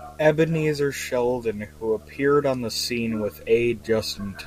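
A screen or video cable is coupling its signal into the audio path for the whole clip, producing video or display buzz: a steady 75 Hz buzz at the picture's field rate, with hash above it, sitting roughly 25 dB below the speech throughout.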